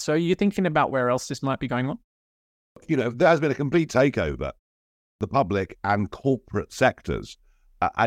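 Speech with a clipped start after a pause at two points. After a 0.42 s gap, the first 384 ms is swallowed at 2.38–2.76 s. After a 0.34 s gap, 359 ms is lost at 4.85–5.21 s. The output device drops into sleep during silence and misses onsets while waking.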